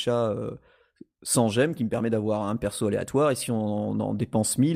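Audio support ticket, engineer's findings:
No audible faults found; no action needed.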